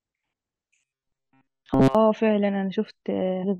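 At 0.34 s, damaged data in a compressed stream makes the decoder misread a frame, lose sync and hunt for the next valid header. The result is a single brief glitch in the speech.

From 0.80 to 1.95 s, new audio is likely arriving too seldom, so playback fills the gaps by looping a segment of about 7.5 ms. This produces robotic sound from repeated short buffers: most of that stretch is repeats, forcing a rigid, metallic buzz at 133 Hz that still loosely tracks the speech.

Within that stretch, at 1.74 s, a repeated buffer occurs. The device replays its last 2.9 ms once more, which fits a 128-sample buffer, and because so little is repeated it comes through as a click or brief buzz rather than an audible stutter.

From 3.43 to 3.44 s, damaged compressed data strikes again. The decoder loses sync over about 14 ms and resynchronises, leaving a short glitch near the end of the clip.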